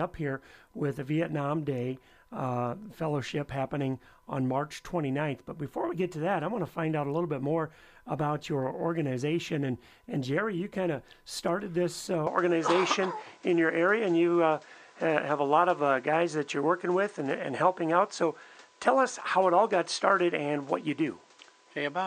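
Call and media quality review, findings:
Input switched to a poorer device, 12.27 s to end: abrupt, gapless change to duller sound, nothing above 9 kHz, level step of roughly 5 dB, new background noise about 35 dB down. Likely cause: capture path moved to another microphone. A codec bandwidth drop would only lose top end, with no new noise floor or level shift.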